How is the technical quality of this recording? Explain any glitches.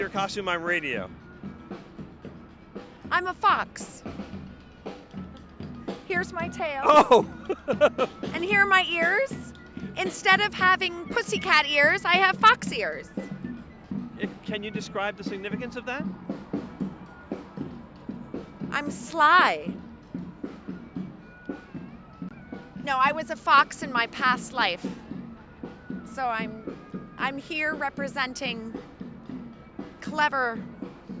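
No glitches or faults can be heard in this recording.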